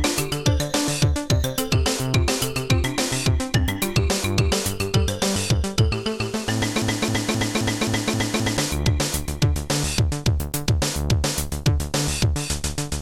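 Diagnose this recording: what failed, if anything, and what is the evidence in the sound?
From 6.82 to 8.57 s there's a broken-record loop: a 263 ms fragment repeats seven times, most likely a stalled playback buffer resending its last chunk.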